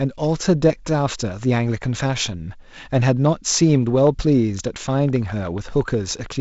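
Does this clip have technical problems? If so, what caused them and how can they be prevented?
Yes. A train of clicks runs from 3.26 to 6.27 s. About fifteen similar pops come at roughly 5 per second, unevenly spaced, near the speech level. The likely cause is interference from nearby equipment or a faulty connection or power supply. Keep devices away and check cables and drivers.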